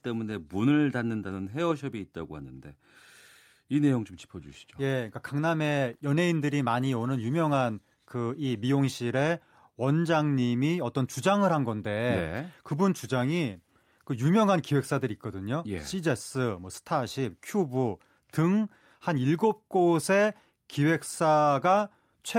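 No technical faults are audible.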